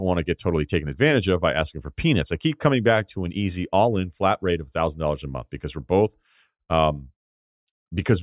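No technical faults are audible anywhere in this recording.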